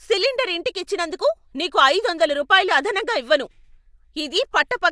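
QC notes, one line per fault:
No faults detected.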